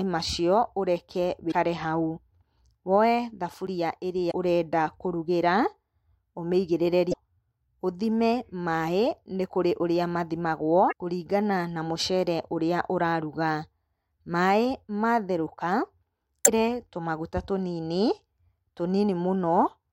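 It's a speech recording with two kinds of fault. The main one is damaged data in a compressed stream, heard as five short glitches at 1.48–1.53 s, 4.27–4.32 s, 7.09–7.15 s, 10.88–10.93 s (just before "kũringana na mũcere") and 16.42–16.48 s. Each lasts around 45 to 65 ms. Bad bytes in the coded stream trip up the decoder, so it puts out garbage for a frame or so. It then loses sync and hunts for the next valid frame header. Separately, at 3.67 s there's a small jump in the speech, roughly 15 ms of sound gone and the edges butted straight together with no gap. That's likely a dropped buffer (overrun): the recording side didn't pull its samples in time, so the hardware wrote over them before they were saved.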